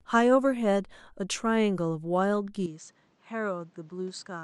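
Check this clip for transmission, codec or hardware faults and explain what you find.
One fault is present. From 2.66 s to the end, the speech abruptly turns duller and about 5 dB quieter, losing everything above 8.4 kHz and gaining faint new background noise, with no gap at the change. The likely cause is an input switched to a poorer device, whose narrower band, lower level and own noise replace the original microphone's.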